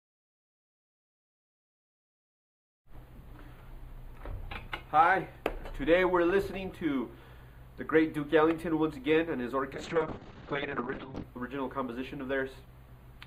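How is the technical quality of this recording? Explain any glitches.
There is one clear glitch, a call bitrate drop from 9.73 s to 11.29 s. The link's bandwidth estimate fell, and the encoder was forced to work with far fewer bits. It spent about 1.5 s at its lowest rate, with coarse coding that suggests something near 6 kbps. At that rate the codec also narrows its bandwidth from 20 kHz to about 6 kHz. The result is a dull, muffled, watery sound with the top end missing, until the bitrate recovers.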